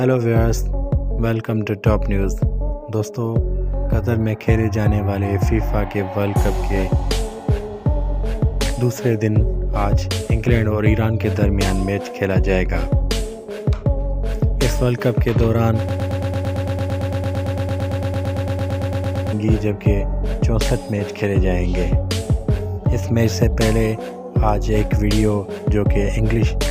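From 15.89 s to 19.33 s there is a broken-record loop. A stalled player, encoder or stream, likely stuck resending the last fragment it held, replays one piece of sound about 113 ms long, back to back, 31 times. The result is a rapid, machine-like stutter lasting roughly three and a half seconds, each cycle identical. Whatever should have played in that span is gone, and normal audio resumes at 19.33 s.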